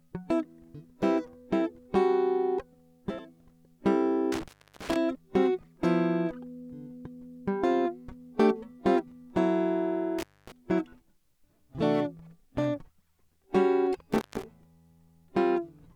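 Intermittent contact cuts the music at 4.32, 10.19 and 14.13 s. A loose connection opens for about 330, 250 and 150 ms. Crackle marks each edge, leaving faint hiss.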